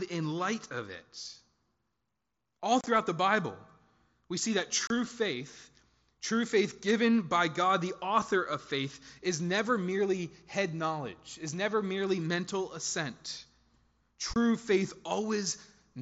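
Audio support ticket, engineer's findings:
Unconcealed Bluetooth headset packet loss at 2.81–2.87 s (scattered, about 37.5 ms missing), 4.87–4.90 s, and 14.34–14.36 s. Hard-edged dropouts: flat waveform gaps and full-band vertical edges on the spectrogram. Gap lengths fit 7.5 ms mSBC frames lost with nothing filled in. The mSBC link itself shows its 8 kHz spectrogram ceiling.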